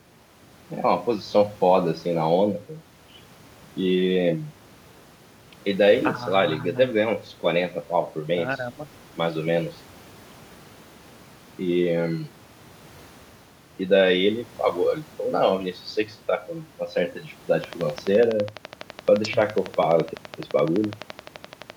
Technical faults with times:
17.64-21.71 train of clicks

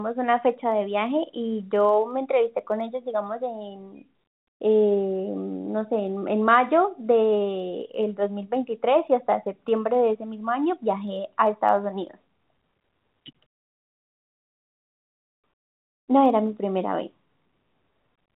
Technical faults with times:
0.11-18.35 clock slip clicks

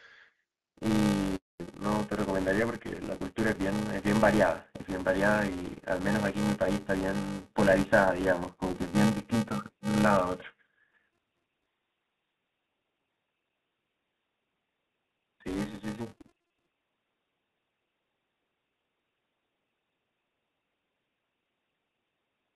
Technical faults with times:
0.00-22.56 filter restarted on every block
1.36-1.60 handover gap
1.60-22.56 fallback to narrowband

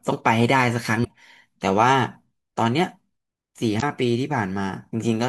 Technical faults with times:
1.01-1.06 damaged data in a compressed stream
3.78-3.83 damaged data in a compressed stream

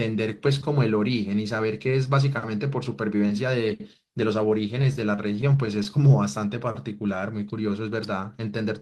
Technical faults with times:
4.81-5.87 repeated stalls (stutter)

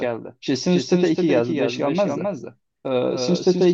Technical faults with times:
0.00-3.73 doubled audio track

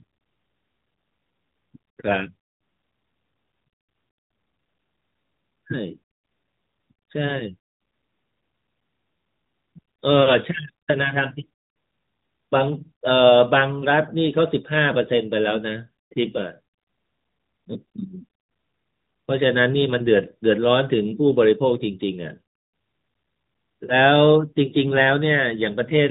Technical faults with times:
none

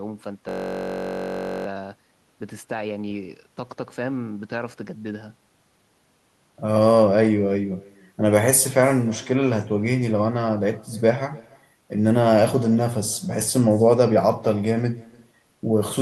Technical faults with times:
0.00-16.02 echo with no canceller
0.49-1.66 system hang loop

